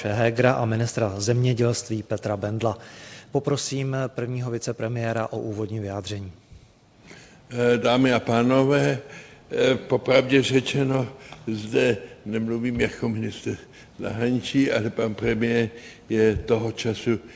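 Small hiccups and a faintly unsteady, slightly dragging tempo run through this call audio, which has nothing above 8 kHz, as fits a G.722 call path. The cause is clock drift between sender and receiver. The sender's clock runs slow, by somewhere around one and a half percent, so the receiver's jitter buffer keeps draining. From 0.60 s to 17.23 s, repeated timing corrections stretch the playback to about 99% speed by repeating short slices at uneven intervals. Together these repeats add roughly a fifth of a second to the audio.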